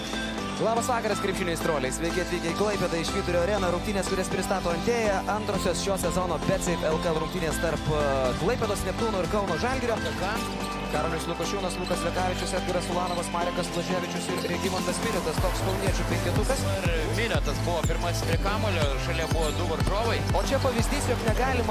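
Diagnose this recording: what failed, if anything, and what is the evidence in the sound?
Nothing stood out on listening that would point to a failure at any stage of the chain.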